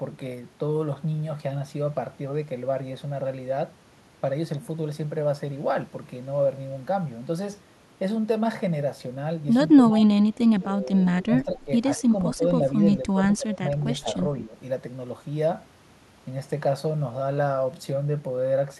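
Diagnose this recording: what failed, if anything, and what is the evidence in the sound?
Call processing failed, with speech suppressed in double talk. The speech level drops at 9.74 to 10.10, 10.60 to 11.69, 12.00 to 12.14, 12.35 to 12.43, 13.04 to 13.21, 13.37 to 13.62 and 14.46 to 14.56 s. The longest drop runs about a second and the deepest falls around 25 dB, while the mildest barely dips. On a waveform the envelope sags in abrupt chunks, and a spectrogram shows those blocks fading across the band. The likely cause is an echo canceller failing to separate the local talker from the far-end loudspeaker echo during overlapping talk and attenuating both.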